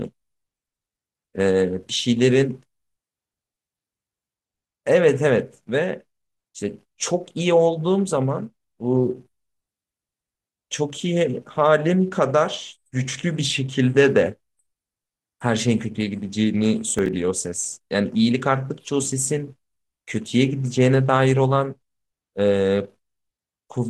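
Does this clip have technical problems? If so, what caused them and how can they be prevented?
Yes. From 16.94 to 17.13 s there is processor overload crackle: the processor missed several short buffer deadlines, roughly five, each skipping a few milliseconds of speech. A spectrogram shows thin vertical broadband streaks, and the waveform shows small gaps with abrupt edges. Reducing processing load or using larger buffers prevents it.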